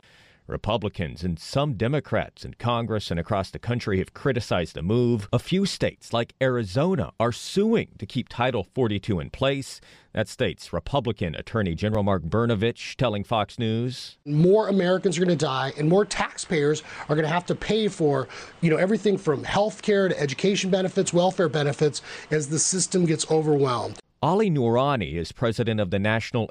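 Brief skips in the speech at 5.95, 11.95, 17.94 (just after "to have to pay") and 23.93 s, each a jump of a few milliseconds, repeating every 6 s. This is audio missing between chunks, likely lost as each 6-second block closed and the next opened.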